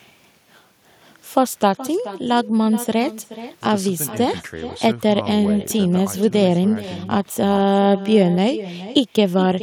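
Throughout the speech recording there is echo with no canceller: every phrase returns as a quieter copy, about 15 dB below the direct voice, trailing by roughly 400 ms. The copy sounds thinner than the original. That points to a far end playing the call over a loudspeaker, with its microphone capturing the playback and no echo cancellation removing it, so the signal comes back after the network round trip.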